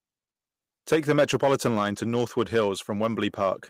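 From 2.03 to 2.05 s there is a lost packet rebuilt from error correction: one 20 ms packet went missing, and the decoder played the low-bitrate copy carried in the next packet. Unlike plain concealment, nothing drops out or smears; the speech simply turns briefly rougher and noisier.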